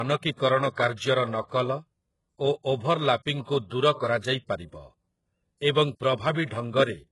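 Low-bitrate audio saved at a high bitrate runs throughout the speech. Nothing sounds above 11.4 kHz, and the coarse coding artefacts persist inside a high-rate MP3. The likely cause is an earlier very low-bitrate HE-AAC-type encode, whose losses re-encoding cannot restore.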